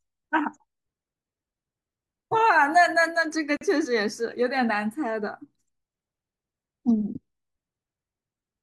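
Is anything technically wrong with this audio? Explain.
Yes. The speech has a gap at a join of encoded pieces, from 3.57 to 3.61 s. The sound drops to silence for about 43 ms, then resumes exactly where it stopped. The piece before and the piece after were encoded separately and butted together untrimmed. The encoder's start-up delay and the padding on the final frame both remain, forming the hole. Its edges are smeared by the codec, so the fully silent part is shorter.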